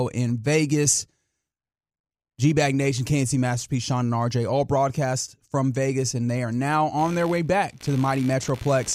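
Speech clip with computer activity noise from 6.98 s to the end at 8.95 s, just after "and they are now": a buzzing chirp pulsing around 70 times a second, about 20 dB under the speech. Unlike steady mains hum, it starts and stops with the computer's load shifting the shared ground.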